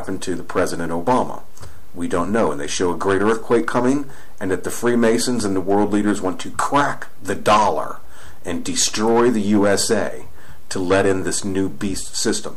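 Nothing in the audio stood out as a technical problem on listening.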